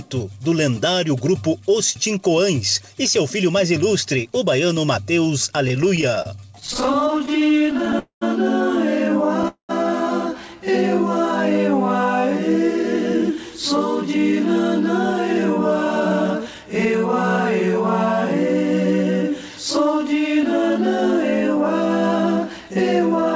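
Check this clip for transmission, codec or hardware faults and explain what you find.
Yes, there are network problems here, all on the receiving side of a call link. The audio has nothing above 8 kHz, which fits a wideband call codec like G.722 at 64 kbps.

Repeated stalls (stutter) run from 5.68 to 7.95 s. Packets kept arriving late, so the jitter buffer ran dry 33 times, with gaps of up to about 29 ms. The receiver stretched the last sound to cover each gap, about 0.35 s in all. It drags and hiccups rather than dropping anything.

Two call audio freezes follow, at 7.99 to 8.23 s and 9.48 to 9.71 s, lasting about 0.23 and 0.21 s. The likely cause is packets held up in transit. The continued sound fades into roughly 0.1 s of silence each time, then picks up where it left off.

Jitter buffer speed-up appears at 12.83 to 14.33 s, 15.67 to 16.94 s and 19.23 to 23.26 s. There the buffer trimmed tiny pitch-period slices to shed backlog: around 50 ms, 50 ms and 150 ms respectively. 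That runs things 3 to 4% fast at unchanged pitch.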